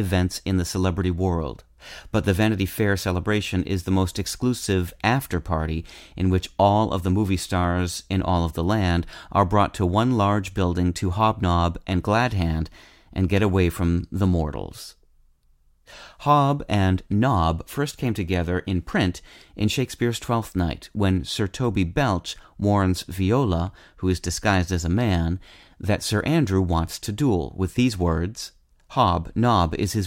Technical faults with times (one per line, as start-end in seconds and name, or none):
none